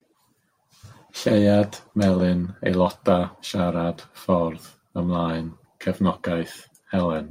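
No technical faults can be heard anywhere in the recording.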